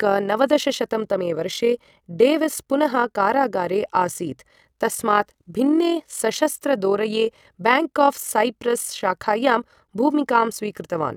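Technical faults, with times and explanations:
Throughout, overlap-add ripple: the speech level swells and dips by about 6 dB at around 40 Hz, once per frame, because the overlapping windows don't sum to constant gain. This gives a rough flutter; unlike dropouts, it is strictly regular and never silences the sound.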